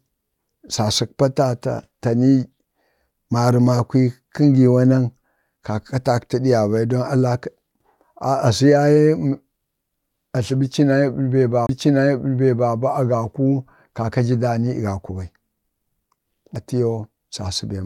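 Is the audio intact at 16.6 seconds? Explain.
No, there is a CD skip at 16.55 s. A knock or a flaw on the disc threw the laser off its track, so it landed on a different turn of the spiral. The player muted for only a few milliseconds and then resumed from that new point rather than where it left off. The result is a brief tick followed by an abrupt jump in the speech, as though a short piece were cut out or repeated.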